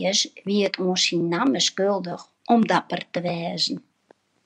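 No technical faults can be heard anywhere in the speech.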